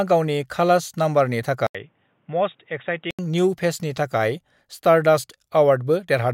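At 1.67 s the speech cuts out for 80 ms, then returns boxy on "न्यू फेसनि थाखाय", with nothing above 3.8 kHz, slightly quieter and over faint new background noise, until 3.19 s. The gap and new noise, unlike plain filtering, mark an input likely switched to a poorer device.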